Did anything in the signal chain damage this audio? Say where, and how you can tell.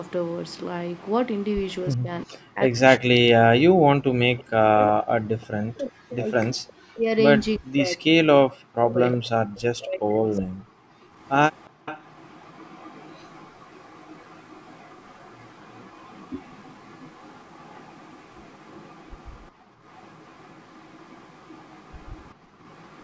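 Yes, the damage happens at the call-processing stage, where echo control handles a loudspeaker path.

Echo leak appears from 0.05 to 1.75 s, briefly at 4.38 to 4.44 s, from 6.68 to 7.55 s, and from 8.91 s to the end. A faint copy of the speech trails the original by 365 ms, at about 30 dB down (about 35 dB in the 6.68 s stretch). On a spectrogram each harmonic stack has a dim duplicate shifted right by that fixed offset. The likely cause is residual echo that the canceller failed to subtract and sent back.

Speech suppressed in double talk shows between 1.96 and 11.05 s. For roughly five seconds in total, the talker's level dips while both sides are active, bottoming out around 40 dB down. In the waveform the envelope sags or is notched mid-phrase. On the spectrogram the upper bands thin out or vanish in patches. This is likely the canceller's suppressor mistaking near-end speech for echo and attenuating both together.

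Background gated by the echo canceller occurs at 11.7 to 11.85 s (about 32 dB deep), 19.56 to 19.81 s (about 26 dB) and 22.41 to 22.59 s (about 13 dB). Each is a fraction of a second. The room noise floor drops abruptly, then returns when the gate releases. On a spectrogram these show as short vertical gaps in the broadband noise. In the waveform, the low-level noise visibly pinches down. The 8 kHz ceiling, by contrast, is just the call's normal bandwidth.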